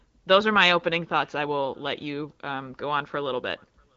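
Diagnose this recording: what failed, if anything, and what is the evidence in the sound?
Nothing in this speech recording points to a failure at any stage. The AMR wideband (HD Voice) path is audible as a band limit with nothing above about 7.6 kHz and only light coding texture, which fits one of the higher AMR-WB rates.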